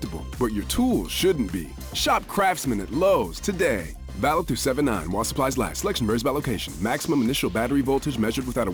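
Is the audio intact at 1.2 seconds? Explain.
No. Sample clock jitter runs through the whole clip, 1.2 s included: a clock wandering by several microseconds mistimes samples, adding hiss roughly 25 dB below the signal that rises with loud, bright passages.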